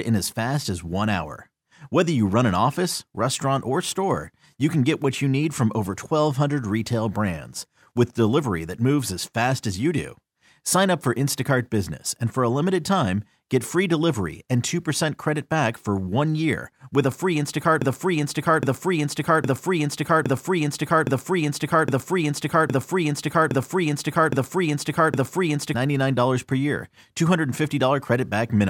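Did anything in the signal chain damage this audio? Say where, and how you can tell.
Yes. A playback or streaming stage likely stalled and kept replaying the last block it held, producing a broken-record loop from 17.82 s to 25.74 s. The same 0.81 s fragment of speech repeats exactly, back to back, ten times, with identical pitch and timing on each pass. No fresh audio comes through during those eight seconds, so whatever should have played in that span is gone rather than delayed.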